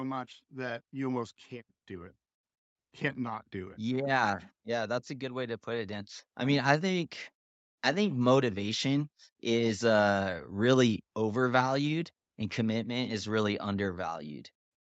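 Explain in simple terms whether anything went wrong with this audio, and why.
From 0.48 s to 6.18 s the speech and the background noise behind it get steadily louder together, ending just before "I mean I think". This is automatic gain rising. The call's level control judged the incoming sound too quiet and turned it up slowly over almost six seconds, so the rise is a smooth swell rather than a jump. The clip's upper range stops at around 8 kHz, set by the codec on the call connection.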